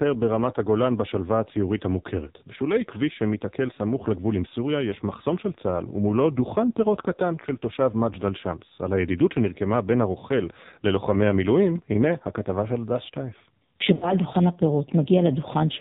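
From start to finish the speech carries AMR narrowband mobile codec damage. Nothing above 4 kHz survives, and voiced sounds come out buzzy and synthetic, which fits heavy compression at a low rate around 5.9 kbps, where a few pulses per subframe drive the vocal-tract model.

Lost AMR speech frames occur twice. From 7.42 to 7.47 s a short dip or warble is heard as the decoder repeats its last pitch and filter settings, consistent with one missing 20 ms frame. From 13.94 to 14.12 s the sound stretches and fades toward silence, with about 80 ms of audio lost, which points to four consecutive concealed frames, then returns weak or rough.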